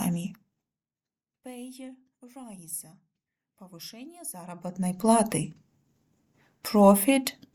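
Nothing technically wrong can be heard in this audio. Its level rises and falls smoothly, as a fader would move it, with no steps or jumps.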